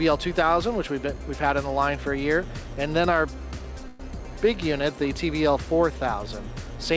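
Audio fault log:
3.88–4.01 s, call audio freeze: packets were likely held up in transit, so the jitter buffer ran dry and the receiver extended the last sound it had into a brief fading buzz or hiss of about 116 ms rather than dropping to silence. When the packets arrived, playback picked up exactly where it had stopped, so nothing is missing, but everything afterwards lands 116 ms late, heard through a call path that carries nothing above 8 kHz.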